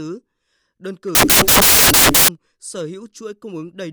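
From 1.15 to 2.28 s the speech turns into loud, harsh broadband noise. These are samples built from the wrong bytes. The reader combines each sample's bytes in the wrong order or alignment. The rapidly changing low bits become the large part of each value.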